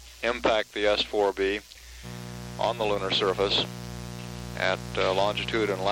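From 2.02 s to the end, a raspy mains buzz from 60 Hz spiky harmonics sits fairly loud; unlike smooth hum, its sharp switching edges reach into kilohertz.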